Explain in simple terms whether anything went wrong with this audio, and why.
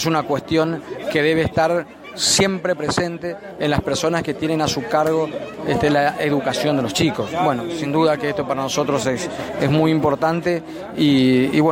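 Nothing went wrong; I hear no faults here.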